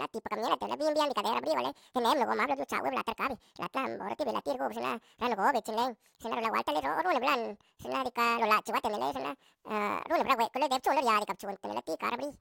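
From start to finish, the speech runs at double speed and sits a full octave high, about 12 semitones up. This is a wrong sample rate fault. The audio was captured at one rate and played at twice that rate, with no conversion between them. The ratio fits 24 kHz material read out at 48 kHz. Pitch and tempo shift together, so voices sound squeaky, rushed and thin.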